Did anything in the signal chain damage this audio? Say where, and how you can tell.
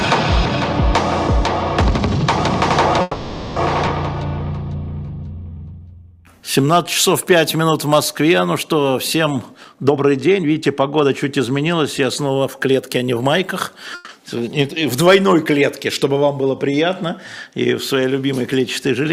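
Yes. Network delivery, into the jitter buffer. A call audio freeze runs from 3.01 to 3.59 s: the last sound carries on for about 550 ms as a fading buzz or hiss, then picks up where it left off. Nothing's lost, it's just a gap, likely from late packets draining the buffer. Another, shorter one hits at 13.95 to 14.12 s, about 140 ms.

There's a skip ahead at 3.86 to 3.90 s. Playback jumps forward with only a tiny join, and roughly 300 ms of audio is simply gone. That's the network or an overflowing jitter buffer dropping a stretch while later packets were already queued.

Jitter buffer slow-down from 5.06 to 6.74 s. The audio drags to 83% speed at unchanged pitch, with sounds stretched out. The receiver repeated pitch periods or bits of pause, adding 303 ms, to rebuild a reserve when the buffer was low or its target delay had just gone up.

Jitter buffer speed-up twice. From 9.52 to 11.74 s it runs at 120%, clearly hurried, with roughly 400 ms trimmed. 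From 12.23 to 13.46 s it's 108%, with around 100 ms cut. The pitch holds in both because the receiver snipped out short pitch-period chunks to shed excess buffered delay.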